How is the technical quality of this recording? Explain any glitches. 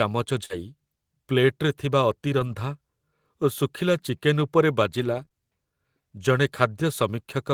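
The recording has one fault: scattered short gaps between 0.45 and 5.32 s. About three brief holes, 80 ms of audio missing in total, with the longest around 40 ms, were patched by extending the preceding sound, giving 280 ms of rebuilt signal. This points to a few lost or late packets. You hear small ticks, smears or hiccups in otherwise clear speech. A spectrogram shows brief smeared, repeated patches, and the waveform shows small discontinuities.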